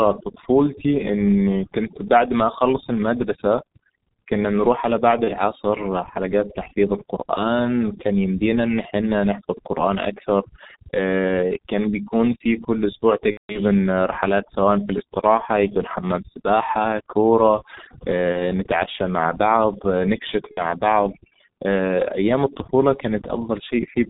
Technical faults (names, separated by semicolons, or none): overdone noise removal; G.723.1 codec; VoIP packet loss concealed by the speech codec